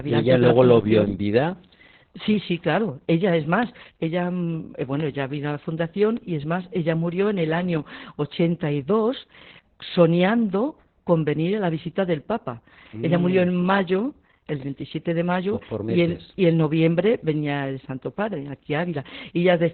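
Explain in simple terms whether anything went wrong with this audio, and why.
The speech sounds muffled, hoarse and slightly robotic throughout, with nothing above about 4.3 kHz. That comes from heavy Opus voice compression squeezing it into a narrow telephone-like band.

Four sharp single ticks appear at 3.63 s (just before "ella mm eh"), 5.00 s, 6.17 s (between "ella vino a la" and "y es más ella") and 14.49 s (after "murió mm en mayo"). Each is a bit error spike, where one flipped digital bit briefly throws the signal off.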